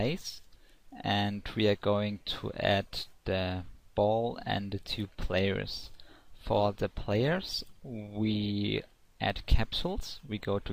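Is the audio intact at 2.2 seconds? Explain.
Yes, the audio is intact at 2.2 seconds, with no dropout, click, distortion or other fault audible at that moment.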